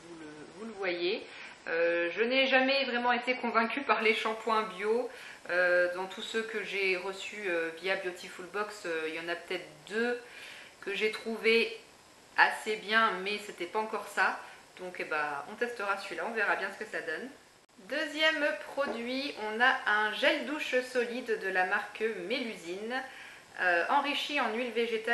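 The first 4.0 s shows an adaptive stream starting at a low bitrate: nothing above 11.2 kHz and heavier codec smear, like a 32 kbit/s MP3, then a clean jump to fuller sound, consistent with 128 kbit/s.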